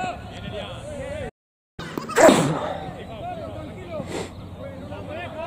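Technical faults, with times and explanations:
1.29 to 1.80 s, playback stall: the sound cuts to silence for about half a second and then resumes. This is unlike a dropout or a packet loss gap. The player likely ran short of data or had its thread blocked.
1.80 to 2.29 s, catch-up at higher speed: right after the gap the audio runs at double speed, pitch rising by roughly ten semitones, as the player resamples its backlog to recover the lost time, then settles back. Unlike a sample-rate mismatch, it is brief and follows a stall.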